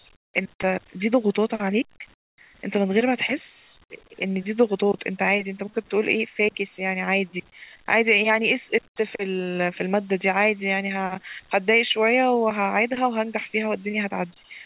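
Comfort noise in place of the background at 0.16–0.34 s, 2.14–2.38 s and 8.88–8.96 s: each pause is likely filled with steady, featureless synthetic noise from discontinuous transmission, about 19 to 25 dB quieter, above a call band stopping at 4 kHz.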